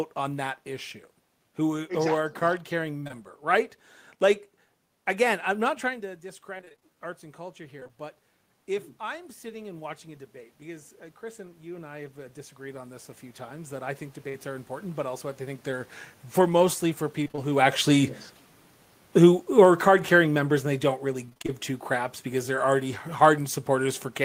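Choppy stretches with bits of sound chipped out come in bursts of repeated packet loss. They run from 2.99 to 3.12 s just after "are a card carrying", from 6.58 to 7.91 s, from 17.24 to 17.40 s, and from 21.26 to 21.50 s, between "and they don't" and "two craps because they're". In each burst, gaps of about 20 ms (up to 27 ms) keep recurring. The receiver patches every gap by stretching the last sound, which gives the robotic texture. In the shorter bursts roughly half the span is patched.

A single brief smear at 14.29 to 14.36 s is short concealed packet loss. About 40 ms of audio never arrived, and the decoder continued the preceding sound to fill the hole before blending back into the real signal.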